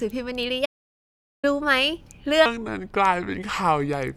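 Audio dropout to silence, from 0.66 s to 1.44 s: the speech breaks off mid-flow and is replaced by about 0.78 s of silence, with no room tone underneath, before cutting straight back in. The input was likely lost for that stretch, through a disconnected device, a failed link or a stray mute, while the recorder kept writing silence. Whatever was said inside that gap is simply gone.

Section at the wrong speed, from 2.46 s to the end of the clip: the speech abruptly slows to about 0.74 times its proper rate, and its pitch drops with it by around five semitones, so the voice turns deep, heavy and drawn out from one moment to the next. Because speed and pitch shift together, this is likely playback or an edit run against the wrong clock for that section.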